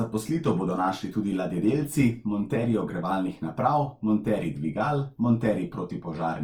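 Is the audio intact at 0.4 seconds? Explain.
No. At 0.4 s the speech carries a rough, grainy texture that runs through the whole clip, likely from Opus compression at a rate fitting about 24 kbps. Starved bands are refilled by folding or noise, so tones turn coarse instead of the hollow, swirling holes of MP3.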